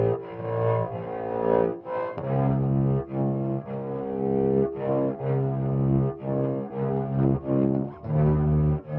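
From start to finish the whole thing runs fast and high, the classic wrong sample rate problem. The audio is being played back quicker than it was captured, with no conversion, so everything speeds up by about 1.38 times and the pitch rises about 5.5 semitones, a bit under half an octave. That ratio fits material recorded at 16 kHz but played at 22 kHz. The sounds come across brighter, smaller and oddly hurried.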